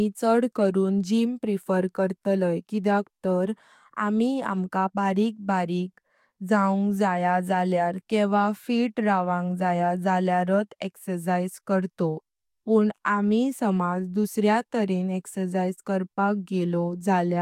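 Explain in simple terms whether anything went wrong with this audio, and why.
Nothing went wrong here: the recording has no dropouts, clicks, distortion or other transmission faults anywhere along its length.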